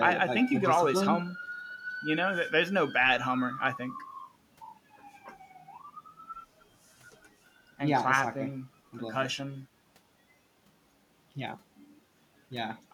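No technical faults can be heard anywhere in the recording; the signal stays steady and intact throughout.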